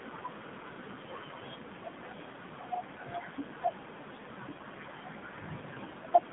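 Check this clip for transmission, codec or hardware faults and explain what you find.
One fault is present for the whole recording: the speech has passed through the AMR narrowband mobile codec, and the damage is plainly audible. Energy sits between about 150 Hz and 3.6 kHz with nothing above. The codec rebuilds each 20 ms frame from a vocal-tract model fed by a few pulses, so at a low mode, consistent with 7.4 kbps, the voice sounds buzzy and synthetic. A spectrogram shows a hard ceiling near 3.6 kHz and smeared, blocky harmonics.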